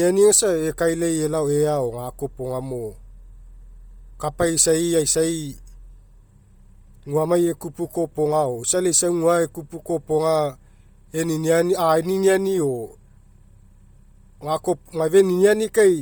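Throughout the speech, the upper spectrum has a breathy, grainy edge, with high-frequency detail replaced by shaped noise. This heavy damage is likely from Bluetooth LC3 compression at a low bitrate, consistent with 32 kbps in 10 ms frames. Content still reaches 20.1 kHz.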